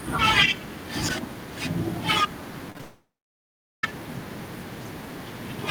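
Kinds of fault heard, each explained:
Repeated packet loss (robotic sound): four short gaps from 2.70 to 2.80 s, each patched by stretching the last sound, leave choppy robotic bursts; waveform shows repeated copied segments.
Long network dropout: audio stops at 2.81 s until 3.84 s, likely from a network outage; a fading buzz gives way to near-silence, a blank spectrogram band for about 0.8 s.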